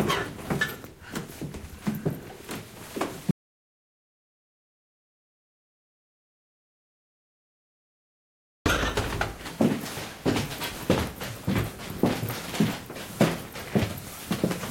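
At 3.31 s the sound cuts to complete silence without room tone until 8.66 s: an audio dropout to silence, likely from lost input.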